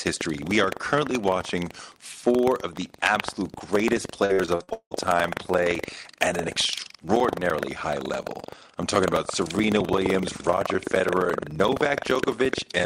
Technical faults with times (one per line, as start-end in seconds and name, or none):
0.00-12.86 buffer tearing
4.25-4.93 repeated packet loss (robotic sound)